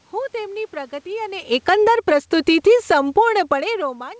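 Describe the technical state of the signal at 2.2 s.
At 2.2 s the automatic gain control is pulling its gain down, a fall of about 13 dB spread from 1.53 to 3.37 s, so the speech and room background sink together. Overlapping this, from 2.03 to 3.87 s, automatic gain rising pushes gain back up by about 5 dB, making the speech and background swell together again.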